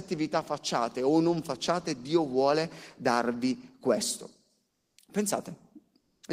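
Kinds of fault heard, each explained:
Comfort noise in place of the background: twice, the real background becomes steady, featureless noise at nearly the same level. Likely caused by discontinuous transmission.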